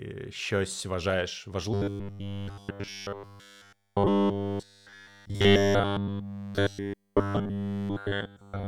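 From 1.74 s, right after "щось вважаєш", the speech turns into robotic sound from repeated short buffers and stays that way to the end of the clip. The voice collapses into a rigid metallic buzz at 100 Hz that roughly tracks the syllables, likely because new audio arrived too seldom and the last 10 ms of audio was looped to fill the gap while the real audio was skipped. The fixed pitch, unaffected by the speaker's intonation, sets it apart from codec smearing.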